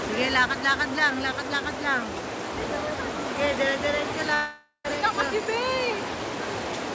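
From 4.34 to 4.87 s, a stretch of about half a second goes missing, likely a long network dropout. The last sound is stretched into a buzzy tail that fades, leaving about 130 ms of near-silence before the audio resumes with the gap's content gone. On a spectrogram, the harmonics blur into a smooth, decaying smear and then a dark band. The waveform tapers to almost flat before jumping back. Across the clip, the spectrum stops sharply at 8 kHz, which fits a G.722 call codec at 64 kbps.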